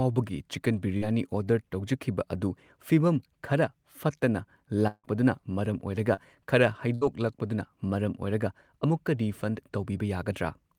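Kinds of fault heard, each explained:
Short concealed packet loss: Two brief smears, one at 0.97 to 1.03 s and one at 6.14 to 6.19 s, where the speech wobbles for an instant before settling back. In each case about 40 ms of the call arrived too late for the decoder, and the receiver covered the hole with roughly 35 to 40 ms of continued sound, carrying on the preceding pitch or its noisy texture, then cross-faded into the real audio.
Long network dropout: Right after "ꯑꯗꯨ ꯐꯤꯕꯝ ꯈꯔ ꯐꯠꯇꯅ", from 4.87 to 5.06 s, the last sound is held on as a fading buzz or hiss that thins into about 50 ms of near silence before the speech resumes further along. Roughly 160 ms of audio is gone, likely because nothing reached the receiver for that stretch, so it extended the previous sound to fill the gap and then gave up.
Burst of packet loss: At 6.95 to 7.03 s, just before "ꯂꯥꯛꯄꯗꯨꯅ ꯃꯔꯝ", the speech briefly freezes into a held, softening buzz or hiss and then jumps ahead. 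About 60 ms of consecutive audio was lost or arrived too late to play, and the receiver stretched the last sound across the gap while turning it down, so the segment in between never appears.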